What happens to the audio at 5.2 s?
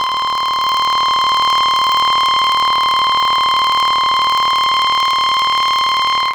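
At 5.2 s, as throughout the music, planar audio read as interleaved plays each 26.12 ms block twice at double speed, giving an octave-up pitch with a 38.3 Hz robotic buzz.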